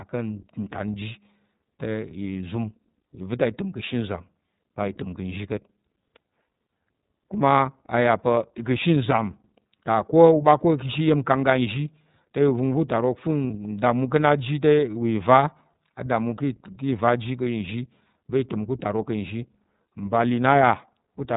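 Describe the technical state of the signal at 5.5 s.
At 5.5 s, as throughout the clip, the speech has passed through the iLBC codec, which codes each frame's excitation independently and passes nothing above 4 kHz. The plainly audible roughness fits its 30 ms, 13.33 kbps mode, leaving the speech muffled, slightly grainy and synthetic.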